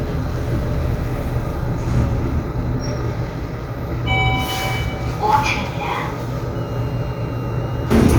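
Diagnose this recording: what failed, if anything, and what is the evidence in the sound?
A switching power supply in the analogue stage ran in an audible burst mode or beat with another supply, coupling onto the signal path. From 6.55 s to the end at 8.18 s, a high whistle of roughly 3 kHz sits about 30 dB below the sound, wandering between 2.75 and 2.94 kHz as the supply's load shifts.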